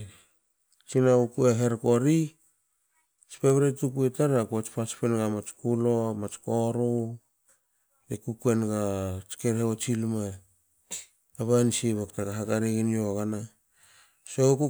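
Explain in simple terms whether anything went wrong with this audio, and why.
Nothing went wrong here: I listened for anything that shouldn't be there, and the recording holds together the whole way with no hiccups to point to.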